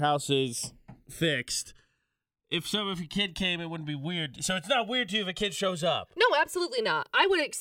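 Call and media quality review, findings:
Channels drifting apart, throughout the speech. Slow flanging, worst summed to mono. Two capture devices on separate clocks, mismatched by a few hundred ppm. Inter-channel delay creeps from zero to about 2 ms by the end. Comb-filter notches sweep slowly downward through the spectrum as the offset grows. Fix: common clock or resample one channel.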